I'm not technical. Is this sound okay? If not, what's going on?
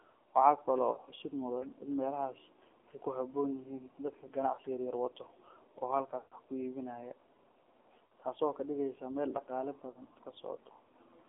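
No. The speech went through an AMR narrowband mobile codec, the compression used on older phone networks. It keeps only a narrow slice of the sound, roughly 250 Hz to 3.4 kHz, and rebuilds the voice from a simple model, so it sounds muffled, thin and a little buzzy and synthetic throughout.

There are also lost AMR speech frames. Radio errors spoiled small chunks of data, so the phone filled the gaps by stretching out the last good sound while fading it. You hear brief dips or warbles at 0.92–0.99, 4.54–4.60, 8.06–8.11 and 9.90–10.01 seconds. The longest drop-out, at 6.18–6.35 seconds, drags out and fades before the voice returns.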